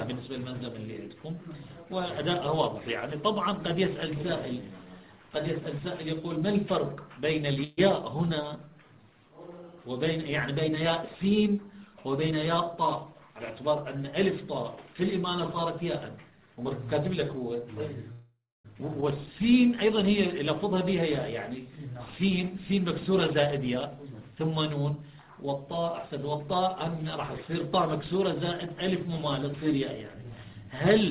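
At 7.64 s a call audio freeze occurs. Packets were likely delayed in transit and the jitter buffer ran dry, so the receiver extended the last sound for about 134 ms until 7.79 s. That fill is heard as a short buzzy smear, after which the audio resumes where it left off with nothing lost but a slight extra delay.

From 12.17 s to 15.57 s there is a jitter buffer speed-up. Having built up surplus audio, the receiver trimmed repeated tiny slices to pull latency back down, removing roughly 150 ms in total. The sound plays about 4% faster at unchanged pitch.

The second freeze runs from 18.12 s to 18.67 s, lasting 524 ms. The concealment buzz fades out, and about 270 ms of that stretch is plain silence before playback picks up again.

At 19.01 to 19.04 s comes a skip ahead. A stretch was dropped while later audio was already waiting, so roughly 200 ms of material is gone and the two sides are butted together with almost no gap. 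The jump claws back some of the delay the previous freeze added.

From 20.64 s to 25.61 s a stronger speed-up runs at 7% faster, cutting roughly 400 ms. The audio sounds hurried at constant pitch. Throughout the clip nothing is present above 4 kHz, which fits a 64 kbps G.711 mu-law call codec.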